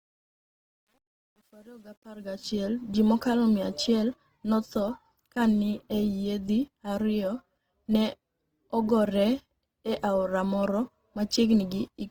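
From the start of the speech to 2.65 s the level rises in a smooth fade-in, but that fade carries truncation distortion. The gain stage keeps too few bits and adds no dither, and the coarse steps suggest roughly 9-bit resolution. At low gain the waveform collapses into a few square levels, so from 0.0 to 2.17 s the quiet portion sounds gritty.

Across the whole clip the speech is plainly grainy and rough, with a noisy, hashy texture on sustained sounds rather than swirling gaps. The likely cause is Opus compression in its CELT music mode at a rate that fits about 16 kbps. The encoder stays fullband, with content up to about 20.2 kHz, but starved bands are filled with folded or noise-like energy, and that is the coarseness heard throughout.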